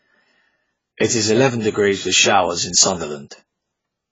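AAC compression throughout: the speech stops dead at 7.7 kHz and sounds smeared and warbly, likely from AAC-LC starved at roughly 16 kbps.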